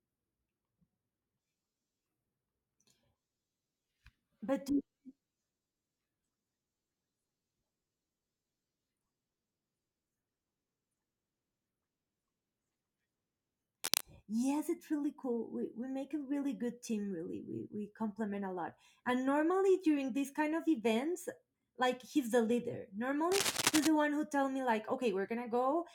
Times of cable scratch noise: 13.82-14.01, 23.32-23.87

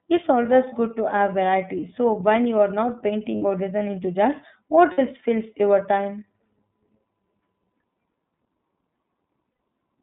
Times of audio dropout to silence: none

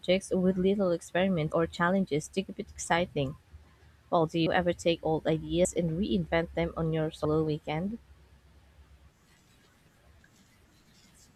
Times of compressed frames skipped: 1.52, 4.46, 5.65, 7.25

